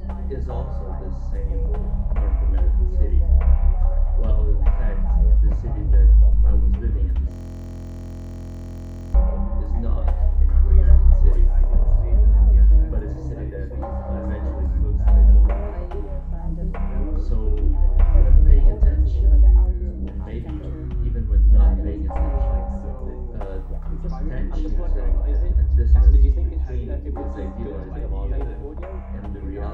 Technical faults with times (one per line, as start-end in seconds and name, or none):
7.31-9.14 system hang loop